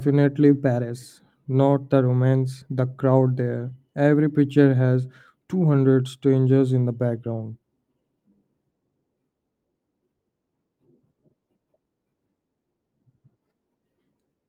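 Listening through this speech recording, nothing stood out as a technical problem.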